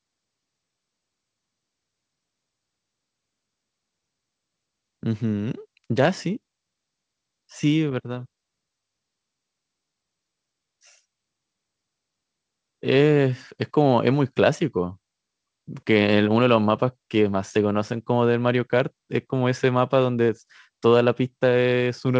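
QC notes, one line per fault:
The speech has come through a WebRTC call path with nothing above 8 kHz, a band limit that fits a wideband call codec such as G.722, and no fault stands out anywhere in the signal.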